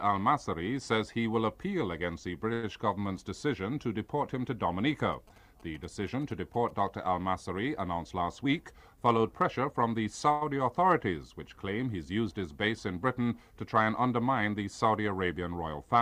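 Twice the sound hangs for a moment, with a slight buzz or dip, from 2.53 to 2.65 s and again from 10.32 to 10.43 s. Each is a short stall from a late packet: the jitter buffer ran dry, so the receiver stretched the last sound by about 95 ms until the packet arrived, then resumed without losing anything. From 5.13 to 6.71 s a galloping dit-dit-dit of short 217 Hz buzzes sits roughly 25 dB under the audio. These are GSM signalling bursts from a nearby 2G phone, which the audio circuit rectified into sound. Between 8.14 and 9.75 s the audio runs about 5% fast and sounds hurried while the pitch stays put. This is a jitter buffer speed-up: holding more audio than it wanted, the receiver trimmed many small pitch-period pieces, removing around a tenth of a second in total.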